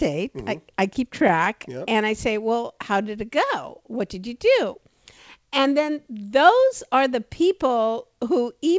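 Between 0.94 and 1.82 s the speech shows scattered short gaps: about seven lost or late packets, each patched by the receiver extending the sound that came just before it. No hole runs much past 15 ms, and roughly 50 ms is filled in total. The result is a run of brief ticks and small smears. On a waveform these look like brief stretches where one cycle seems copied. On a spectrogram they show as thin vertical seams where the harmonic texture briefly freezes.

From 2.73 to 3.17 s there is a jitter buffer slow-down. The receiver's reserve of audio was low, so it repeated single pitch periods many times to rebuild it. This adds 42 ms and plays the passage at 93% speed with no pitch change. Syllables sound slightly drawn out. A spectrogram shows the harmonics holding their spacing while the segments stretch in time. In the waveform, the repeated cycles appear as unusually regular, near-identical periods.

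Between 5.37 and 5.81 s a jitter buffer speed-up does the opposite. The buffer held more audio than its target, so the receiver cut out short chunks of one or a few pitch periods. This removes about 40 ms and runs the passage at 107% with the same pitch. The speech sounds a little hurried there. On the spectrogram the segments are compressed in time while the harmonic spacing stays unchanged. In the waveform, small splices appear where cycles were dropped.

Through the whole clip, the call path leaves nothing above 8 kHz, a flat ceiling on the spectrogram that fits a G.722 codec.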